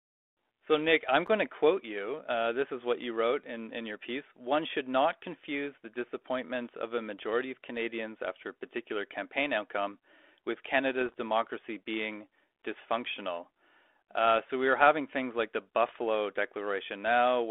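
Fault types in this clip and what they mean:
Block of digital silence: At 1.27 s the speech drops straight to zero for about 10 ms and comes back with no fade. That's a chunk of output that never got filled in time, or got zeroed out. At that length you don't really hear a hole, just a sharp tick where the waveform jumps down to nothing and back up again.
Bit errors on an ADPCM link: Two rough patches, from 11.01 to 11.21 s and from 15.89 to 15.98 s, where the error rate is a few tenths of a percent. Each corrupted bit throws the decoder's step size and predictor off, so the damage rings on briefly instead of staying a single glitch. You get pops and gritty bursts with little jumps in level, and the first patch runs longer. It sits on a telephone-band G.726 path whose light coding noise fits the 32 kbit/s mode.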